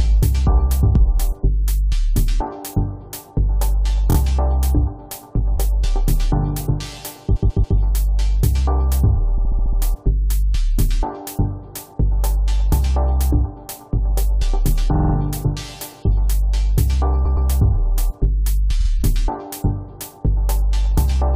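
Repeated frames stutter at 4.10, 7.35–7.77, 9.37–9.79, 14.94–15.13, 17.24–17.47 and 18.80–18.89 s. A compressed block of 23 to 139 ms replays two to six times. Unlike a dropout, nothing goes missing; the audio is only lengthened.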